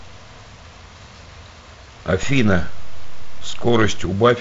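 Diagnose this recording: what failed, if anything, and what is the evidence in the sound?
A DC step at the converter stage. At 2.23 s a low thump marks the waveform's zero line jumping to a fixed offset. It holds until 4.05 s, where a second thump marks the line stepping back. The speech runs on unchanged across both points. The offset does not decay, so it stays flat for about 1.8 s. That points to a recalibration or an offset input switched in and out. The wideband telephone coding stays band-limited below about 7.8 kHz, which fits G.722 at 48 kbit/s.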